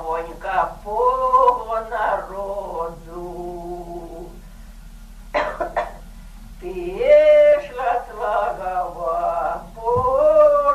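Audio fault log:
No faults logged; signal path nominal throughout.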